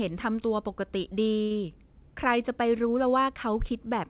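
At 1.42 s there is a short stall from a late packet. A packet arrived late and the jitter buffer ran dry. The last sound is held for about 85 ms, to 1.53 s, with a slight buzz or dip. Nothing is lost, and the speech then resumes, band-limited to 4 kHz by the call path.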